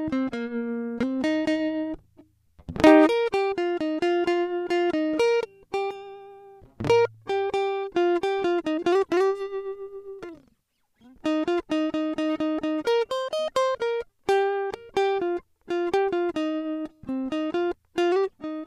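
Nothing in this music clip calls for comment, since not a single technical fault turns up anywhere in it.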